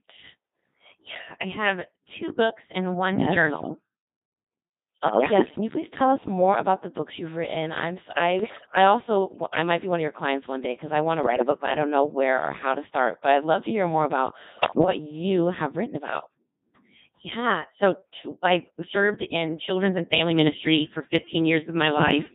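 From the first moment the whole clip passes through a Codec 2 vocoder, heavily degraded, at what sounds like the 2.4 kbit/s mode. The original waveform is gone. The decoder rebuilds the speech from pitch, voicing, energy and a coarse spectral envelope, so it comes out robotic and buzzy. A spectrogram shows neat, evenly spaced harmonic stripes under smeared formants, and the waveform looks like an unnaturally regular train of pulses.

Four bursts of bit errors on digital voice radio then break up the synthesis. The first runs from 5.08 to 5.61 s, just before "you please tell us". The second runs from 8.40 to 8.76 s. The third runs from 11.24 to 11.58 s, between "because I want to" and "but I don't know". The fourth runs from 14.48 to 14.88 s, between "to hear more about" and "you have written about". Corrupted bits, a few percent of them, scramble the pitch, level and voicing parameters of consecutive frames, which fits around a dozen to two dozen frames per burst. 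The result is warbling bleeps and gibberish. On a spectrogram the harmonic stripes jump abruptly up and down, and the waveform envelope lurches from frame to frame.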